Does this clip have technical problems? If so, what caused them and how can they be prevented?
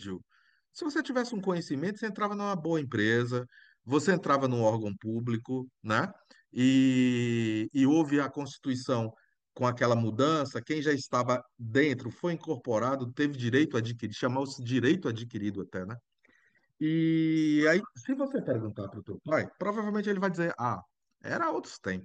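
No, the speech signal in this clip shows no technical faults that need a cause or a preventive measure.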